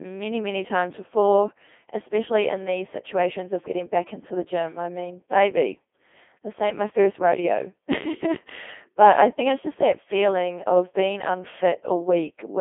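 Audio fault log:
Throughout: Codec 2 vocoder, heavy damage; speech rebuilt from sine waves sounds robotic and buzzy, confined to 250 Hz to 3.5 kHz, fitting a 2.4 kbit/s mode.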